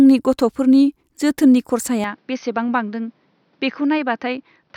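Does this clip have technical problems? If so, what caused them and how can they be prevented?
Yes. From 2.04 s, right after "गथ'फोरनि जोथोननि", the speech turns duller and drops by about 5 dB, with a new noise floor roughly 40 dB down and no gap at the change. This is likely an input switched to a poorer device. A spectrogram shows everything above 6.2 kHz vanishing, and the waveform shrinks. Preventing it means locking the recording input and disabling automatic device or headset-profile switching.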